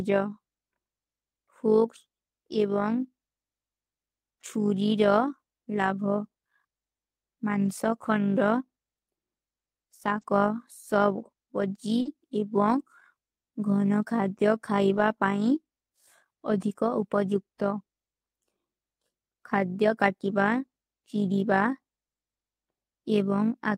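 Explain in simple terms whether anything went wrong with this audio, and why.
Overlap-add ripple runs through the whole clip: the level pulses about fifty times a second because rejoined sound frames don't overlap evenly, giving a rough, robotic flutter.

Lost packet rebuilt from error correction occurs at 5.83, 7.65, 10.17 and 12.05 s, and over 14.93–14.99 s. Missing pieces were replaced by rougher backup copies sent alongside the next piece, so those moments sound briefly grainy.

Short concealed packet loss occurs at 10.21–10.25 s and 12.01–12.07 s. Sound never arrived, so the receiver stretched the previous sound to fill the hole, causing a quick smear or wobble.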